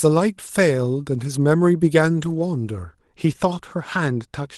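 From the start of the speech to 2.83 s, pre-emphasis was left on: treble boosted for transmission was never de-emphasised, lifting 10 kHz about 11 dB above 1 kHz along a steady rising slope that fits the FM 50 µs curve. This is unlike a presence boost, which peaks and falls. The sound is thin, bright and sibilant until it evens out.

At 0.47 to 0.49 s and again at 2.17 to 2.39 s, a lost packet was rebuilt from error correction. The later stretch covers six separate packets. Low-bitrate copies fill both spots, so there is no silence or smeared repetition as with plain concealment, only briefly rougher, noisier sound.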